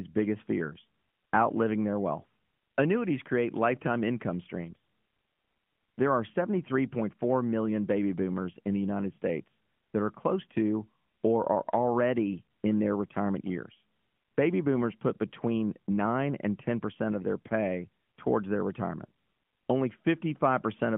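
Nothing here counts as a fault; what you hear is just the usual narrow, phone-line character of speech carried through the AMR narrowband mobile codec, with its highest setting, about 12.2 kbps, the likely fit for how lightly it touches the sound.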